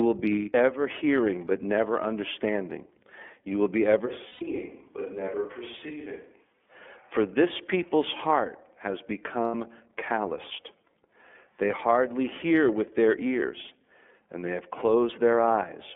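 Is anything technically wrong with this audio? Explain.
Yes, there are three problems. The iLBC codec shapes the whole clip: the band is limited to 250 Hz to 3.4 kHz, and frame-by-frame excitation coding leaves speech plainly rough and synthetic, which fits the 13.33 kbps, 30 ms mode.

Lost iLBC frames occur from 0.33 to 0.49 s, 4.28 to 4.43 s and 9.45 to 9.54 s. These gaps of 150, 120 and 90 ms are each filled with a repeated, noise-mixed pitch cycle that sounds like a held buzzy vowel, and speech recovers immediately afterwards.

From 4.08 to 6.68 s the voice abruptly turns hollow and roomy, with thinner bass, a level about 10 dB lower and faint background noise. This is likely a switch to a distant microphone, and the return to the close sound is equally sudden.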